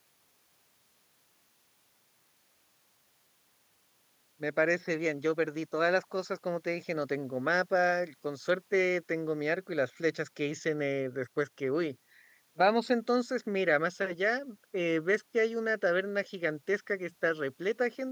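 A speech recording with nothing technically wrong to point to. There are no events in it that need a time or a cause.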